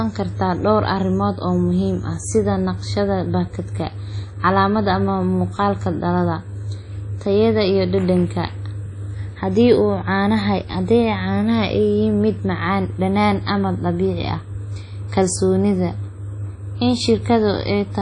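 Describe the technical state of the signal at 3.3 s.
At 3.3 s the speech carries audible damage that runs through the whole clip: nothing above 10.1 kHz, with a ringing, washy smear and hiss pumping with the signal. This is likely WMA compression, its long transform blocks spreading quantisation noise, which fits a bitrate near 32 kbps.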